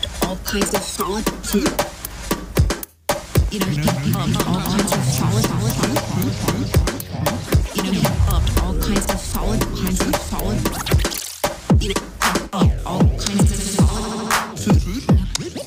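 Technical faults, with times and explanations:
6.24 s, dropped buffer (overrun): the sound jumps forward with no gap of silence. This is likely an overrun, where a few milliseconds of samples were overwritten before being collected, so the audio on either side was butted together abruptly.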